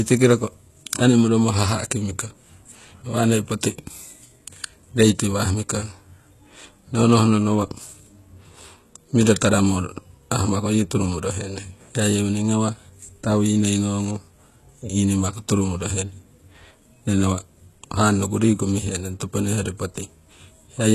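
Throughout, the treble sounds rebuilt rather than captured, with gritty, lispy sibilants and nothing above 12.3 kHz, likely HE-AAC compression at a bitrate fitting about 16 kbps.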